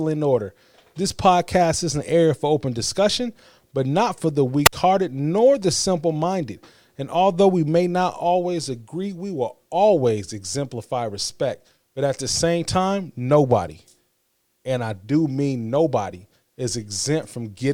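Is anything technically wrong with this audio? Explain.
Yes. At 4.65 s the speech shows a wireless microphone squelch dropout lasting until 4.73 s. The analogue FM link from the transmitter lost enough signal strength that the receiver's squelch circuit closed and muted its output rather than pass the noise of a failing carrier. You hear a short burst of hiss as the signal fades, then a hole of near silence of about 57 ms, before the voice comes back once reception recovers.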